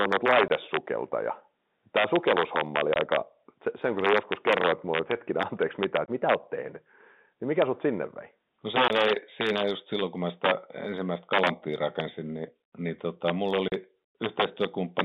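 Right from the start there's integer overflow on this speech. The loudest peaks run about 7 dB past the top of the integer range and, instead of being held at the limit, wrap round to the opposite sign. On a small fraction of samples that gives harsh cracks, far nastier than ordinary clipping.

On top of that there's packet loss filled with silence: hard-edged 20 ms gaps at 0.48, 2.94, 6.06 and 8.88 s, then a 40 ms one at 13.68 s, which fits two 20 ms packets going missing back to back. Each dropout sits inside the narrow telephone band of the G.711 coding.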